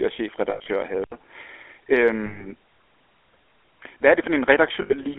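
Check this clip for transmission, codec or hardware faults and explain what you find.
Three kinds of fault run through the speech: a GSM full-rate codec throughout, three bursts of lost GSM frames, and a switch to a poorer input device.

GSM full-rate codec, whole clip: the voice has a plainly audible buzzy, gravelly roughness and sounds squeezed into a telephone band of roughly 300 Hz to 3.4 kHz. The coarse texture fits the 13 kbps GSM full-rate codec. That codec rebuilds the voice from a vocal-tract model driven by a thinned, regularly pulsed excitation, so fine detail is replaced with grit.

Lost GSM frames at 0.50 to 0.67 s, 2.26 to 2.47 s, and 4.82 to 4.95 s: each time the voice freezes into a rough, metallic ring instead of moving on. The decoder is repeating the last good frame's settings. The first burst loses 120 ms scattered over 160 ms, with the longest gap around a tenth of a second. 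The later bursts lose 140 ms and 80 ms.

Input switched to a poorer device, from 1.04 s to the end: the sound drops out for 80 ms, then returns duller and boxier with nothing above 3.9 kHz. It is also about 5 dB quieter and carries a faint new noise floor far below the voice. The likely cause is the recording input changing mid-stream to a lesser microphone or a headset's call profile, with its own narrower band, tone and level.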